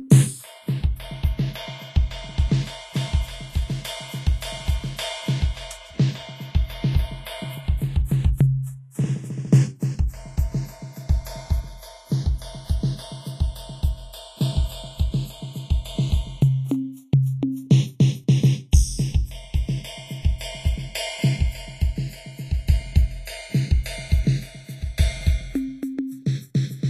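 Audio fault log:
throughout, channels drifting apart: the two channels run on clocks about 20 ppm apart, so their offset creeps to roughly half a millisecond, sweeping comb notches through the music as slow flanging.
throughout, Vorbis compression: likely low-bitrate Vorbis coding quantises the treble coarsely and removes everything above 14.2 kHz, leaving plainly audible hissy, grainy texture, roughened tones and blurred attacks.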